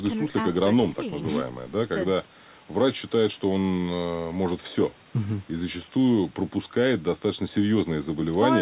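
Nothing is technically wrong with this speech recording, which carries the narrow telephone-band sound of a G.711 call, with nothing above 4 kHz.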